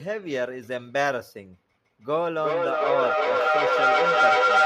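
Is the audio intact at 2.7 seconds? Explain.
No. At 2.7 seconds the clip is inside a feedback howl that starts at 2.14 s and runs to the end. Sound leaks from a loudspeaker back into a microphone, gaining level each trip. It narrows to a tone near 1.5 kHz, repeats roughly every 0.4 s, and peaks about 6 dB above the speech.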